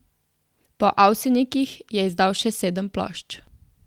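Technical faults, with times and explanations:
No technical faults can be heard in this speech.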